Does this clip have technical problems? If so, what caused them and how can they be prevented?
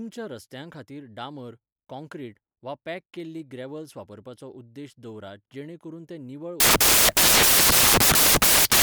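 Yes. From 6.60 s to the end, at 8.83 s, the speech turns into loud, harsh broadband noise: samples built from the wrong bytes, where misaligned or swapped bytes make the fast-changing low bits dominate. The spectrogram shows broadband fill and the waveform a dense block. Prevent it by declaring and checking byte order and sample alignment at every read.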